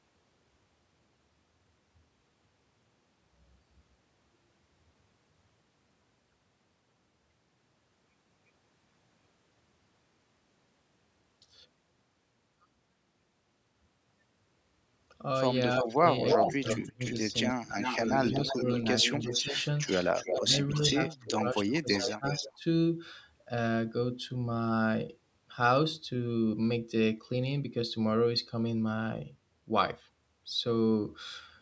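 From 15.76 to 17.14 s, an echo leak returns a copy of the speech about 0.33 s late, roughly as loud as the original. The likely cause is loudspeaker pickup the far end's echo canceller missed. From 15.82 to 18.69 s, speech suppressed in double talk makes the talker dip deeply in pieces, likely the canceller turning down its own talker along with the loudspeaker echo. A second echo leak runs from 17.81 to 22.58 s, 0.34 s behind and slightly quieter. Overlapping it, the speech dips briefly from 19.24 to 19.57 s and more deeply from 20.29 to 22.64 s.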